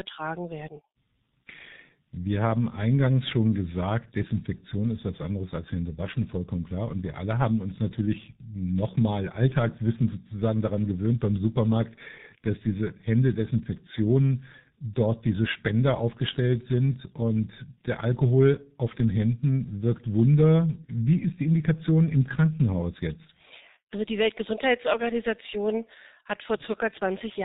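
Speech runs through the G.723.1 codec from start to finish, with heavy codec damage. The sound is muffled and hoarse and consonants are blurred, which fits the codec's 6.3 kbit/s mode. The codec passes nothing above 4 kHz and updates its voice model slowly across 30 ms frames. On a spectrogram, energy stops sharply at 4 kHz, and sibilant bursts appear smeared and blocky in time rather than as crisp transients.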